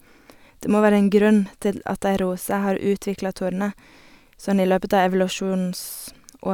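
No technical faults can be heard anywhere in this speech, so there is nothing to describe in time order.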